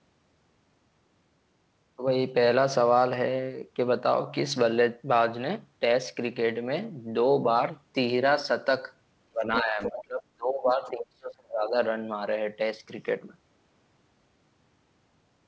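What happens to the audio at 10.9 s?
Speech suppressed in double talk runs from 9.31 to 11.74 s: with both sides talking, the echo canceller likely turned the talker down, leaving the voice deeply dipped and broken. The other side's voice leaks through from 10.85 to 10.9 s, a brief, very faint scrap of likely residual loudspeaker echo far below the speech.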